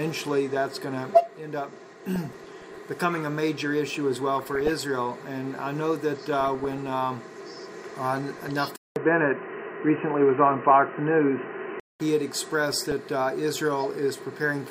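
Weak DAB reception lets bit errors slip past error correction into the MP2 data, corrupting sub-band samples and scale factors frame by frame. The result is DAB burbling, short noise blips and sub-band level jumps over the audio at 2.16–2.78 s, 4.39–4.76 s, 6.33–6.88 s and 8.20–8.50 s. At 8.76 s the input likely switched to a poorer device. After a 200 ms silence, the band stops at 3 kHz, the level shifts by a few decibels and a faint new noise floor appears, leaving the sound dull and boxy until 12.00 s. Burbling returns at 12.72–12.92 s.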